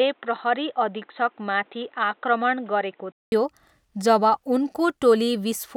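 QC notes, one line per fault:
0.00–3.32 s, input switched to a poorer device: speech has nothing above 4 kHz, so it's dull and boxy with its own faint noise floor well under the voice; 200 ms gap at 3.32 s, then it opens up at the same level. Likely a headset call profile or second mic.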